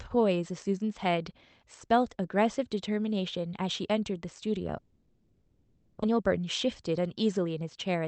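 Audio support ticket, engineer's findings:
Long network dropout, 4.77–6.04 s. Speech smears into a fading buzz, then near silence. Likely packet loss: concealment stretched about 1.25 s, and roughly 1 s of speech never returns. Delay shifts by around a fifth of a second.

Jitter buffer speed-up, 6.12–8.02 s. Speech hurried, pitch unchanged, about 106% speed. Buffer overfilled after the gap. Receiver trims pitch-period slices repeatedly, roughly a tenth of a second in total, to pull latency back down.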